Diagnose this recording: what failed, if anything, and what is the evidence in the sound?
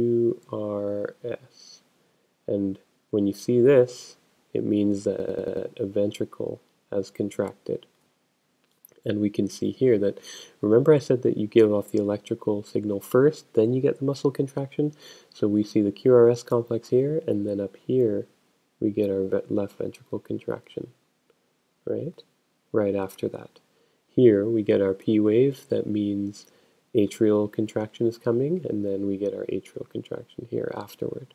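A system hang loop at the driver or buffer stage, from 5.20 to 5.67 s. A 93 ms fragment repeats exactly five times, a machine-gun stutter at about 10.8 Hz, which fits a 4096-sample ring buffer replayed while the host stalled. Essentially no audio is lost afterwards.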